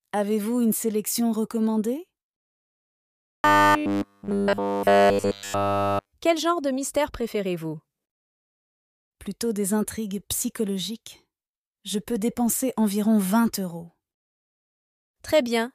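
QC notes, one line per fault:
3.15–6.12 s, robotic sound from repeated short buffers: rigid 100 Hz metallic buzz, likely a 10 ms buffer replayed when input starved; spectrogram shows flat harmonic comb, waveform identical cycles.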